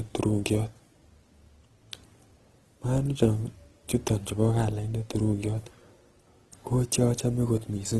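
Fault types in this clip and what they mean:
Opus compression: The speech carries the grainy, rough texture of an encoder that keeps each band's overall energy but fills the detail with folded copies or noise, so it is plainly degraded without sounding swirly or hollow. The character fits Opus's music mode at a low rate around 16 kbps, likely the cause. On a spectrogram the content stops sharply at 12.5 kHz, with speckled, noise-like texture in the upper bands instead of clean harmonic lines.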